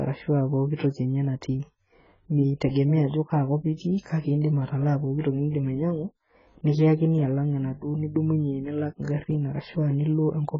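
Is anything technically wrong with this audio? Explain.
Yes. Throughout the speech, nothing appears above 7.6 kHz, leaving a dull, smeared, warbling sound that is likely heavy AAC compression at a very low bitrate. A spectrogram shows a flat ceiling with patchy holes.

Pre-echo appears at 0.75 s, 3.08 s and 5.20 s. A short hiss precedes each attack by 45, 55 and 38 ms, because block-wide quantisation noise spreads ahead of the attack. Waveforms show low fuzz leading each onset.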